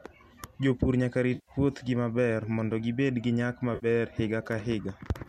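AAC frame loss with concealment hits at 1.35 to 1.51 s and again at 3.75 to 3.86 s. The decoder rebuilds each gap, about 120 ms and 70 ms, from the last good spectrum, which fits the roughly 10 ms frames of a likely low-delay AAC stream. Both stretches of speech come out smeared, noisy or phasey.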